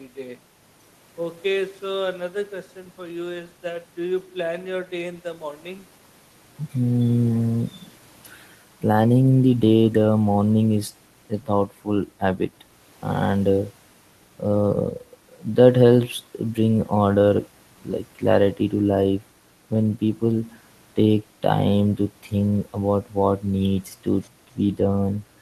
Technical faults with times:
none

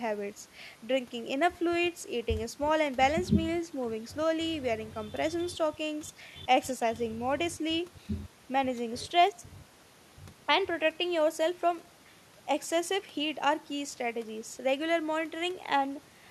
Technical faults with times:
none

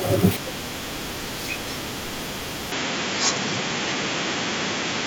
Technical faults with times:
2.72-5.07 input switched to a poorer device

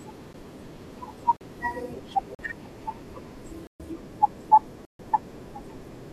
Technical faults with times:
0.33 block of digital silence
1.37-1.41 block of digital silence
2.35-2.39 block of digital silence
3.67-3.80 block of digital silence
4.85-4.99 block of digital silence

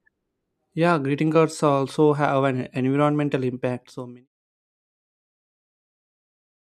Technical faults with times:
none

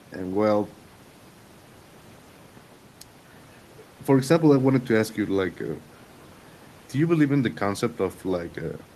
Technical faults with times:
none

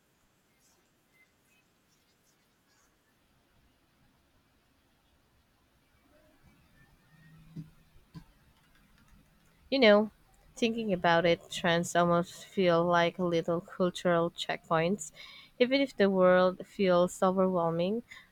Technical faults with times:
none

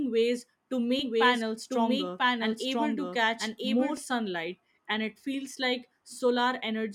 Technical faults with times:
0.99-3.97 doubled audio track

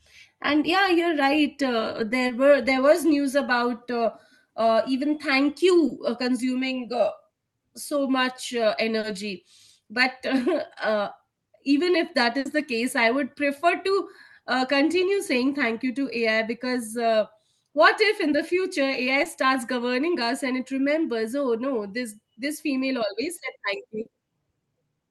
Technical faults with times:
2.27-2.31 short concealed packet loss
5.87-5.91 short concealed packet loss
8.99-9.05 short concealed packet loss
12.39-12.47 burst of packet loss
19.23-19.27 short concealed packet loss
24.01-24.07 short concealed packet loss

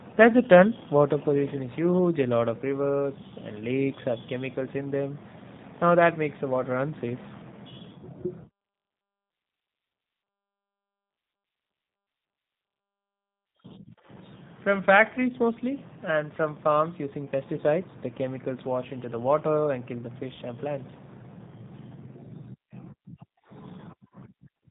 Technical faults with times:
0.00-24.71 G.729 codec

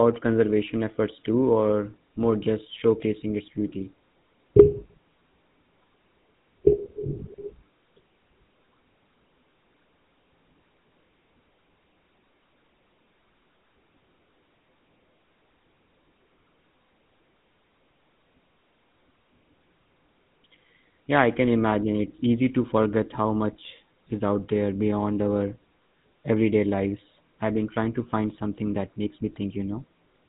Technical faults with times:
0.00-30.29 GSM full-rate codec

